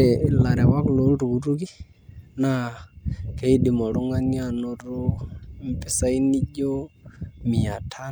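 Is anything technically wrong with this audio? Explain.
No, nothing technically wrong can be heard here.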